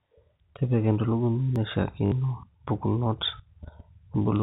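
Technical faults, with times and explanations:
1.56 s, dropped buffer (overrun): the sound jumps forward by a millisecond or two with no gap. The likely cause is samples being overwritten before the program read them. The waveform shows a sudden step, and the spectrogram a thin vertical broadband line.
2.06–2.12 s, packet loss with last packet repeated: a brief robotic stutter lasting 60 ms, which fits three lost 20 ms packets replaced by replaying the last one. The run of repeats buzzes at 50 Hz. The waveform shows a copied segment three times, and the spectrogram faint vertical lines 20 ms apart.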